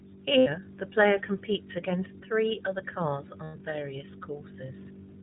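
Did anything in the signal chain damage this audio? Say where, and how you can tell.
Yes. At the codec stage, the whole clip has passed through the iLBC codec, and the damage is plainly audible. The speech is band-limited to narrowband, with nothing above 4 kHz, and it has a slightly rough, synthetic texture. This comes from coding each frame's excitation independently at a low rate. The texture fits iLBC's 20 ms frame mode, and the quality points to a bitrate of roughly 15 kbps.

At the network stage, two lost iLBC frame events are audible, from 0.38 to 0.48 s and from 3.44 to 3.56 s. They are roughly 80 ms and 100 ms of missing audio. Each gap sounds like a held, faintly buzzy vowel. The decoder concealed the missing packets by repeating the last pitch cycle blended with noise and letting it decay. Because each iLBC frame decodes independently, the speech recovers cleanly right after each gap.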